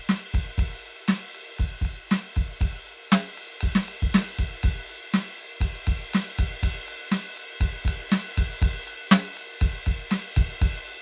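A music recording with no technical faults detected at any point in it.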